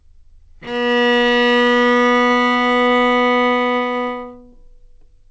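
Around 2.28 to 2.32 s, and again at 2.86 to 2.89 s, you get short concealed packet loss: about 20 ms of audio each time didn't make it to the decoder, so the receiver papered over the hole by extending the preceding sound and easing back into the real signal. Each one comes across as a quick smear or wobble, with the second patch a bit briefer. The call path's band limit shows too, with nothing above 8 kHz.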